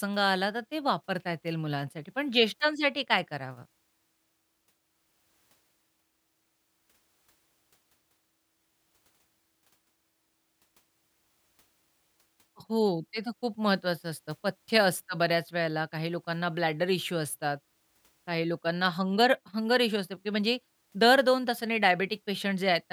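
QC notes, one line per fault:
No faults heard anywhere in this speech recording.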